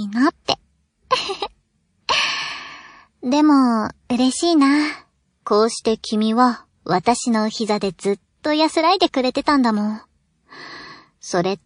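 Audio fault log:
throughout: MP3 compression. The speech sounds watery and swirly, with dulled treble, metallic chirps on sibilants and smeared onsets, likely from MP3 encoding at a starved bitrate, consistent with about 40 kbps, where the encoder truncates high frequencies and zeroes weak spectral lines frame to frame.
0.45 s, 7.03 s, 9.44 s: pre-echo. A short hiss precedes each attack by 35, 31 and 24 ms, rising about 13, 17 and 14 dB, because quantisation noise spreads across a long transform block, consistent with 52 ms, and the encoder never switches to short blocks.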